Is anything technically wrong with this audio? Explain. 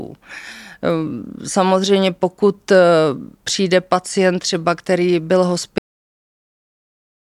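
Yes. A cut-off end at 5.78 s: the final buffers were never written or played, so right after "pacient třeba který byl" the speech stops mid-sound and drops to digital silence with no decay.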